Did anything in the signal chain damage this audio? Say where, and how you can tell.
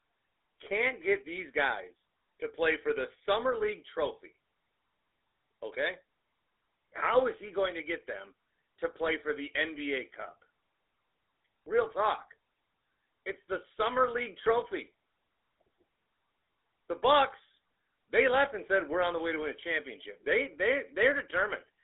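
Yes, at the codec stage: the speech has passed through the GSM full-rate codec for its whole length, with a sound that fits the 13 kbps full-rate mode. The coder models the vocal tract and drives it with a sparse, regularly spaced pulse excitation, so voicing takes on a plainly audible buzzy, gravelly roughness. The channel runs only from about 300 Hz to 3.7 kHz, so the low body and all upper brightness are missing, leaving a thin, narrowband telephone tone.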